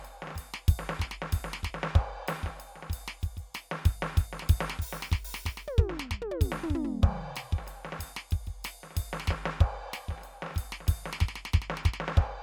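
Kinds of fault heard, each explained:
No technical faults detected.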